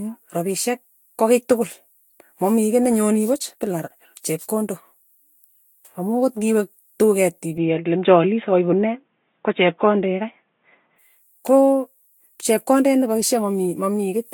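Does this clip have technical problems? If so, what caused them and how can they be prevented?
Yes. Throughout the speech there is generation loss: a swirly, hollow smear with blurred consonant attacks, likely from re-encoding in Vorbis about four times at a rate that sounds near 62 kbit/s. Each pass requantised on a shifted frame grid. A single encode at that rate would sound cleaner. Keep one lossless master and encode once.

From 7.58 to 10.99 s the sound turns dull and boxy, with nothing above 3.8 kHz and a faint new hiss about 50 dB down. The input was likely switched to a poorer device. A codec cutoff would last throughout, but here the band narrows abruptly with no gap or level jump and then recovers. Lock the input device before recording.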